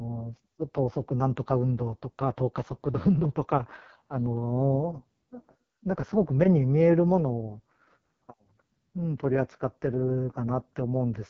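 From start to finish the speech carries the sound of the AMR wideband (HD Voice) codec at a very low rate, with heavy damage that points to roughly 6.6 kbit/s, the bottom of its range. The model that rebuilds the vocal tract from pulses has too few bits to work with, so voicing comes out rough and raspy, with a buzzy, grainy edge. Nothing is present above 7 kHz, and the top band is filled with shaped noise instead of real detail.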